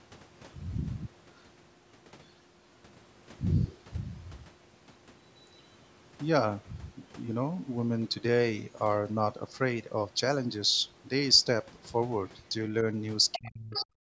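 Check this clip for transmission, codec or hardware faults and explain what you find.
Two problems appear in the final second of the clip, both pointing to echo cancellation on a loudspeaker call.

Other side's voice leaking through, at 13.33 to 13.5 s and 13.74 to 13.86 s: a faint second voice, roughly 10 to 15 dB under the speech, likely residual far-end echo the canceller left in.

Speech suppressed in double talk, from 13.37 s to the end: the talker's level collapses, dropping by around 35 dB, likely because the canceller treated overlapping talk as echo.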